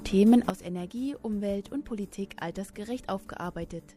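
A digital gain change was most likely applied in a single step at 0.5 s, with no ramp to ease the transition, such as a level setting or bit shift taking effect from one sample to the next. The result is a sudden gain jump: the audio and its background noise fall together by about 12 dB at that instant, and the reduced level holds from there to the end of the clip.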